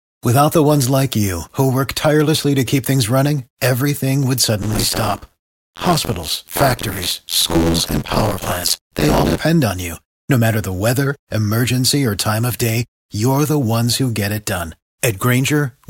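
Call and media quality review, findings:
Buffer tearing, 4.62–9.40 s: robotic buzz at 86.1 Hz over the speech, fitting a 512-sample buffer. Writer and reader slipped; most of each period replays audio about 50 ms stale.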